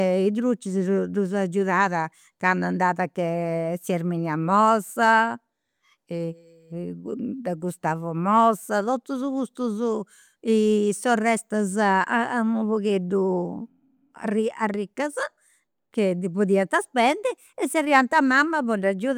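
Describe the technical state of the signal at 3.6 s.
At 3.6 s the speech signal is intact, with no audible technical fault at that moment.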